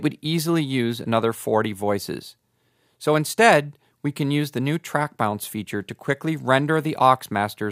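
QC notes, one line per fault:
Nothing to flag here, as no faults turn up anywhere in the audio.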